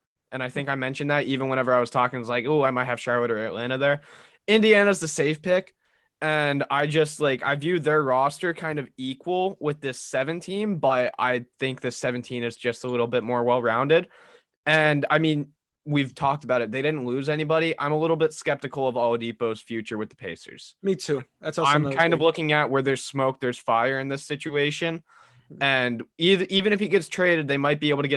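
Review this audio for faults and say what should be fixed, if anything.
Short concealed packet loss occurs three times in this speech: 10.87 to 10.91 s, just before "I think the"; 24.47 to 24.51 s, right after "there's fire in this"; and 26.57 to 26.61 s, just before "if he gets". Each time, 20 ms of audio missed the decoder. The receiver extended the preceding sound to fill the gap, then blended back. Each spot is a brief smear. A deeper jitter buffer or forward error correction would prevent it.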